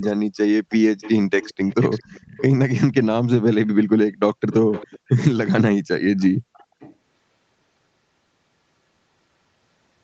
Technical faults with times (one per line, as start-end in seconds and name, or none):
0.01-0.12 echo leak
0.69-0.76 echo leak
1.01-1.11 echo leak
1.40-2.42 echo leak
4.71-5.25 echo leak
6.18-6.95 echo leak